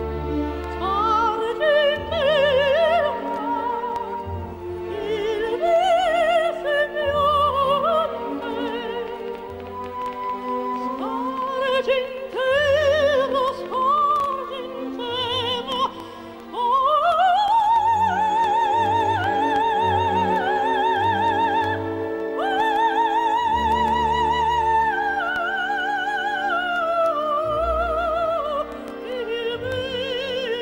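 From 9.08 to 14.34 s, something, likely interference from nearby equipment or a faulty connection or power supply, injects a train of clicks: around forty similar pulses at about 7 per second, unevenly spaced, popping and ticking over the sound at roughly its own level.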